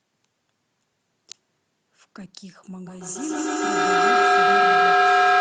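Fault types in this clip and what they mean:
Feedback howl: from 2.86 s, a microphone-loudspeaker loop grows louder each trip into a tone near 700 Hz, repeating roughly every 150 ms, about 16 dB above speech.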